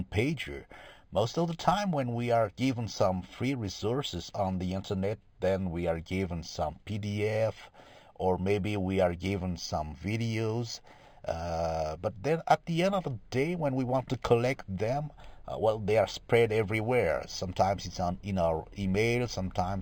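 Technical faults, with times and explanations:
Throughout, imaging from linear upsampling: straight-line interpolation from what sounds like 11 kHz material leaves a faint mirrored band from 5.5 to 11 kHz, roughly 25 dB down, giving speech a metallic shimmer.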